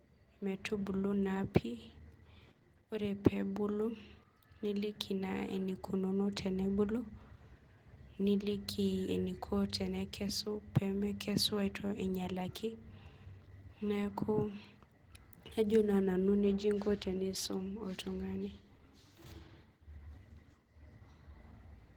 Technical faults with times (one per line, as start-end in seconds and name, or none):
0.00-21.96 Opus voice compression